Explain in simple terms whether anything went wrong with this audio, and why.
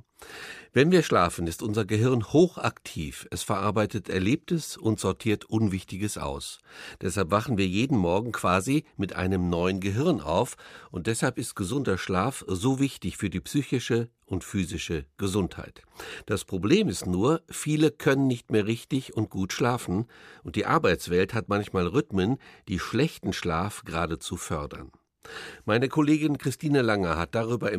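Nothing went wrong here: the recording carries through with no technical faults to point to at any moment.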